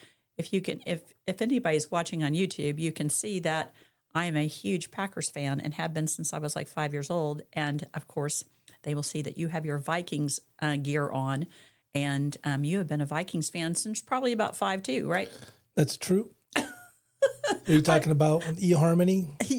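Nothing stood out as a technical fault on listening to this audio.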